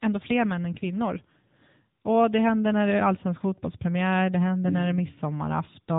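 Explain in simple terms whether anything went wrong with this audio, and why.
The speech runs through the AMR narrowband mobile codec for the whole clip: everything above 3.8 kHz is gone, and the low bit budget makes the voice plainly buzzy and synthetic.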